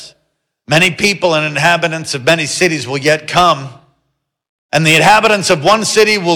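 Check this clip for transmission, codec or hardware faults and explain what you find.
Hard clipping runs through the whole clip. The signal is driven roughly 10 dB past what the stage can pass, so a few percent of samples hit the ceiling and are cut flat. Loud moments get a harsh, gritty fuzz. The waveform shows squared-off peaks, and a spectrogram shows harmonic smear reaching up into the high kHz range.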